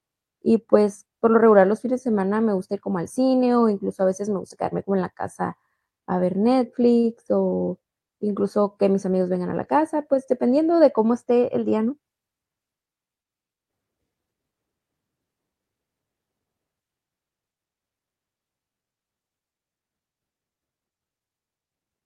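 A speech recording with two timing faults. At 6.99 to 7.06 s there is a short stall from a late packet. A packet arrived late and the jitter buffer ran dry. The receiver held the last sound for about 43 ms, then resumed where it stopped. Nothing is lost, but the sound lingers with a faint buzz or dip. From 11.64 to 11.93 s comes a jitter buffer speed-up. The buffer had built up extra delay. The receiver trimmed small pitch-period slices, about 50 ms in total, so the speech runs at 113% speed. The pitch stays the same, and the passage sounds hurried.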